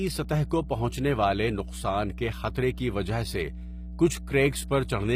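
Mains hum runs through the whole speech clip as a steady low tone at 60 Hz, sitting roughly 10 dB below the speech. Power-line current has leaked into the signal path, the way a ground loop or a nearby transformer can couple it in, so the hum stays fixed in pitch and level underneath everything.

HE-AAC compression is the likely cause of the processed, unnatural treble heard throughout, damage that is plainly audible on the speech. Nothing reaches above 15.5 kHz. The coder keeps only the lower spectrum and synthesises the upper range by copying lower bands upward and shaping them with a coarse envelope. The rebuilt treble is therefore not the original, and harmonics fail to line up across the crossover. The extent of the damage fits a low bitrate of around 24 kbps in the HE-AAC v2 form.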